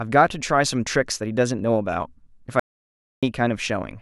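At about 2.60 s the speech drops out to dead silence until 3.23 s, a gap of roughly 0.63 s with no room tone at all. That's an audio dropout to silence, likely from the input briefly disconnecting or muting while zeros kept being written, so whatever was said there is lost.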